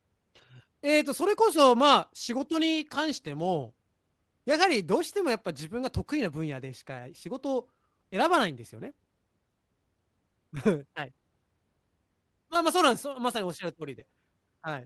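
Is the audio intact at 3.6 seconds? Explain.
Yes, the audio is intact at 3.6 seconds, with no fault at that moment.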